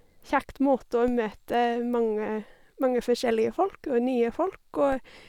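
At 1.08 s and again at 4.93 s, a DC step shifts the waveform's zero line by about -27 dBFS, heard as a low thump. Each offset then drains away as if through a 5 Hz high-pass, while the speech carries on unchanged.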